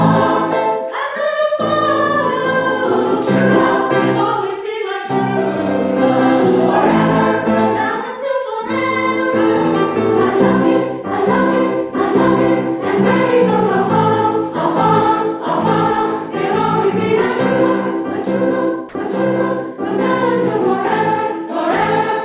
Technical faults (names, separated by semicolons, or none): sound dropped by the voice detector